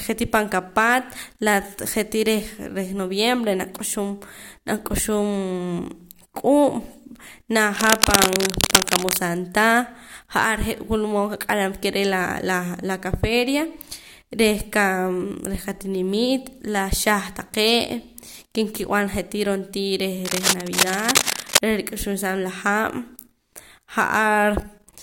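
Speech with cable scratch noise from about 7.75 to 9.19 s and 20.25 to 21.58 s: dense, uneven rustling bursts roughly as loud as the voice, likely from a worn cable or connector being moved. Unlike isolated clicks or steady hiss, each burst is a continuous scratchy patch.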